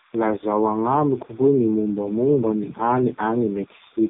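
A speech clip with a faint timecode bleed running throughout: a chirping square-wave warble near 1 and 2 kHz, about 30 dB below the speech, switching at a 30 frames-per-second rhythm, unlike a steady hum or single whine. Over it lies heavy AMR narrowband mobile codec damage. Nothing passes above 3.7 kHz, and the voice turns buzzy and synthetic, pointing to a very low bitrate. Plain band-limiting would sound muffled but natural, not this buzzy.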